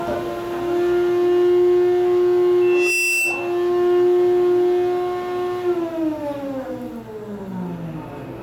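Everyday sound with loudspeaker feedback squeal from 2.61 to 3.66 s: a microphone-speaker loop rings, swelling a 2.7 kHz tone within a fraction of a second to match the surrounding level. It appears as a bright horizontal spectrogram line.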